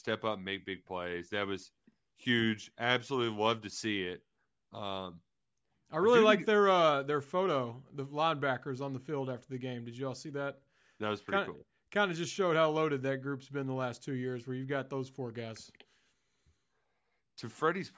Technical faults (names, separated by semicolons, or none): none